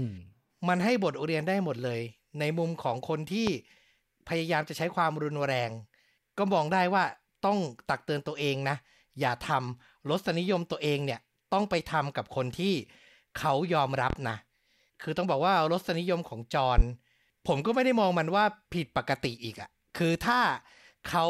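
A loud pop hits at 3.47 to 3.51 s. Another comes at 14.10 to 14.14 s, and a third at 16.78 to 16.82 s. Each is a single sharp pop, roughly 15 dB above the speech. The speech carries on underneath each one. The likely cause is a sudden voltage pulse, from a switch, static or a driver glitch, entering the signal path. The circuits after it shape that pulse into a brief, hard click.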